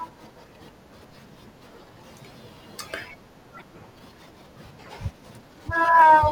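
A broken MP3 bit reservoir is the likely cause at 3.57 to 3.62 s: after missing frames, the next frame borrowed data that was gone. The speech jumps ahead, and for about 54 ms, roughly two 24 ms frames, a brief disturbance replaces it.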